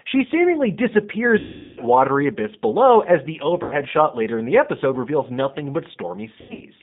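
The whole clip has G.729 codec damage, which fits G.729A at 8 kbit/s. The speech is narrowed to about 150 Hz to 3.7 kHz and sounds plainly rough and synthetic.

There's VoIP packet loss concealed by the speech codec at 1.39 to 1.81 s (about 380 ms lost, before "watery abyss below as"), at 3.63 to 3.75 s (80 ms, between "abyss below as the" and "shot later in the") and in scattered bursts from 6.41 to 6.64 s. Each time the decoder stretches the last sound into a buzzy tone or coloured noise that fades.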